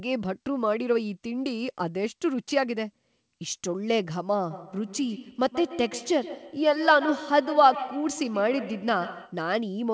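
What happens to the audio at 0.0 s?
Nothing goes wrong at 0.0 s; the speech there comes through intact, with only the normal band limit of the call path, which leaves nothing above 8 kHz.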